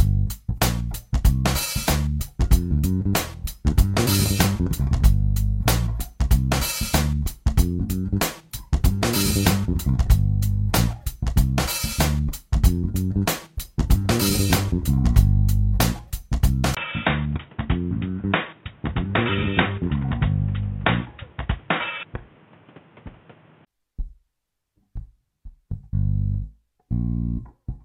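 From 16.75 s to 23.67 s the sound turns dull and boxy, with nothing above 3.8 kHz, drops by about 5 dB, and picks up a new background noise roughly 30 dB below the signal. A brief gap of about 20 ms marks the change. This is likely an input switched to a poorer device, such as a second microphone or a headset's call profile, whose narrower band, level and noise floor take over until the original input returns.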